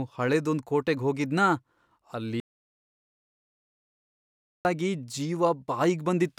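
At 2.4 s the speech drops out to silence until 4.65 s, a gap of 2.25 s with no room tone beneath it. This audio dropout to silence most likely means the input was cut off while the recorder kept writing silence.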